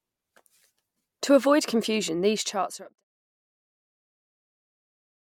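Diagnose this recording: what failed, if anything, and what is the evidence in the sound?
Nothing failed in this recording.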